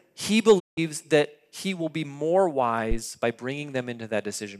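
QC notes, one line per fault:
0.58–0.79 s, digital broadcast dropout: the speech fades out over about 20 ms into a 168 ms hole, consistent with roughly seven corrupted frames muted by the receiver.
2.91–2.98 s, phantom power thump: right after "he will be more", a deep thump dies away within 14 ms as a supply step on the live input passes through the coupling capacitors.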